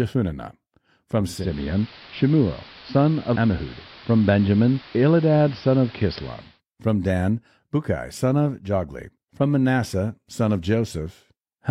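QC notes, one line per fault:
1.26–6.61 s: digital radio blending to analogue. A 0.34 s cross-fade swaps in the AM broadcast. Hiss rises, about 25 dB below speech. Level shifts about 2 dB.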